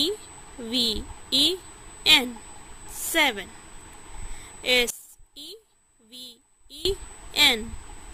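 A steady USB whine sits under the audio from the first moment to the end: a fixed 8 kHz tone, well below the main signal at roughly 25 dB down. The pitch points to 125-microsecond bus microframes leaking in through the power or ground wiring.

From 4.90 to 6.85 s the sound collapses by about 21 dB, leaving a faint residue. The likely cause is one channel inverted, so the centred material common to both channels cancels when summed to mono.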